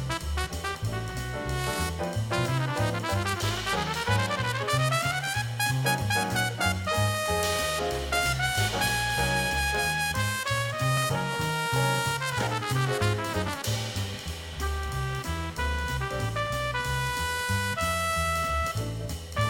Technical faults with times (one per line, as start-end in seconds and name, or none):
10.96 compressed frames skipped
13.47 compressed frames skipped